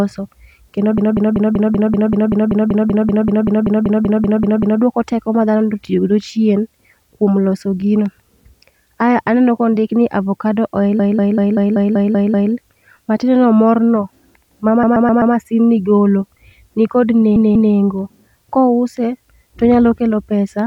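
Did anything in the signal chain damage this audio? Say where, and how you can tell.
Yes. The damage is at the codec or storage stage: repeated frames. From 0.98 to 4.82 s, just before "teko ma", a 192 ms block of speech loops twenty extra times. After "kondik ni avocado oil" it repeats eight times (10.99–12.53 s). A 128 ms block recurs four times at 14.83–15.34 s, and after "ni golo ni kod" a 192 ms block plays twice more (17.36–17.74 s). The stutter shows compressed frames were duplicated. That adds about 6.3 s in total.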